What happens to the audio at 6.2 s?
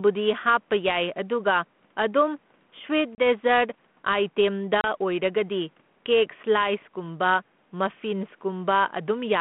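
At 6.2 s the speech shows gain pumping, present across the whole clip: the level swings by around 5 dB, pulling loud and soft parts closer together so the sound is squashed. This likely comes from gain set too high, with a fast limiter repeatedly pulling the level down.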